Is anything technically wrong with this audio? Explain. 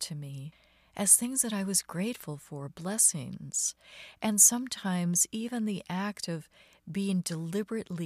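No, nothing technically wrong stood out on listening to this speech recording.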